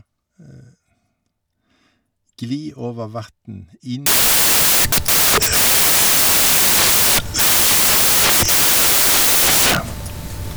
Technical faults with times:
4.06-10.56 samples built from the wrong bytes

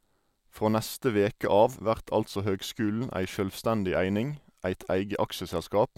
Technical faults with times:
none

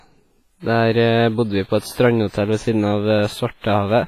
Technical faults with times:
0.00-4.07 WMA compression

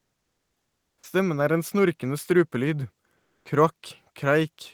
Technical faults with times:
0.00-1.03 comfort noise in place of the background
1.00-1.03 onset clipped by the voice detector
3.17-3.45 comfort noise in place of the background

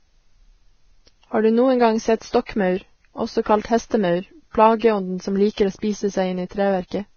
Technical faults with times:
0.00-7.16 Vorbis compression
2.46-2.49 pre-echo

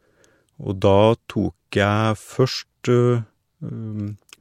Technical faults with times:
1.71 pre-echo
2.83 pre-echo

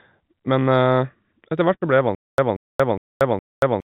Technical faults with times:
1.74-1.83 burst of packet loss
2.15-3.86 stutter with silent gaps

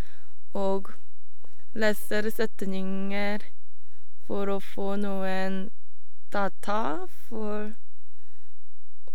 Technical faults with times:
0.00-9.14 DC offset

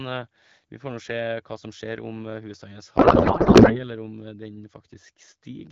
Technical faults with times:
2.97-3.84 codec payload misread

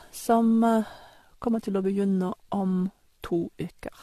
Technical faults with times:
0.00-4.03 generation loss

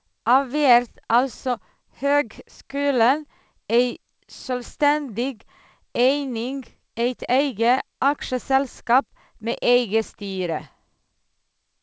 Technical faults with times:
none

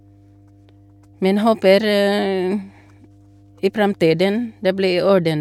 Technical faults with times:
0.00-5.41 mains hum

